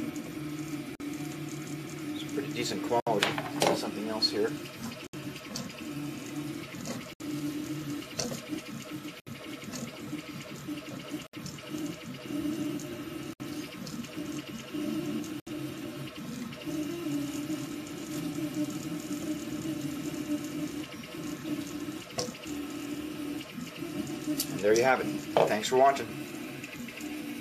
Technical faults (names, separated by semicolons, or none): gap at a join of encoded pieces